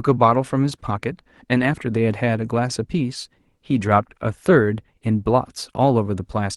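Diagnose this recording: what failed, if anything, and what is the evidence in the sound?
Nothing in this speech recording failed: the signal arrives intact through the WebRTC call path, where the codec limits the audio band to about 12 kHz as that path is set up to do.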